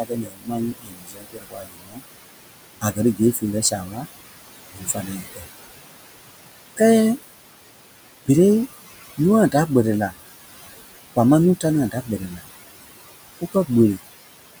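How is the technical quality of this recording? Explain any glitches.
Two processing faults affect the speech, both from an aggressive noise suppressor working against room noise that sits about 12 dB below the voice.

Noise suppressor artifacts run through the whole clip. The suppressor pulls down every frequency band it judges to be steady noise by about 19 dB, re-deciding frame by frame. The background therefore sinks in the pauses and swells back under the voice. On a spectrogram, the noise floor appears as blotchy, flickering islands that switch on and off across frequency rather than a smooth haze. In the waveform, the pauses look almost empty.

Speech cut by the noise suppressor happens five times: 0.03 to 2.02 s (deepest drop about 22 dB, affecting nearly the whole span), 3.15 to 4.06 s (about 13 dB), 4.71 to 5.46 s (about 20 dB), 11.91 to 12.41 s (about 13 dB) and 13.41 to 13.7 s (about 14 dB, only a brief moment). 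In each case the suppressor mistook quieter parts of the speech for noise and turned them down with the background, so soft consonants and endings sound swallowed or faint. A spectrogram shows gaps or dimmed patches in the speech energy, especially the faint high-frequency consonant traces. In the waveform, the envelope dips inside phrases.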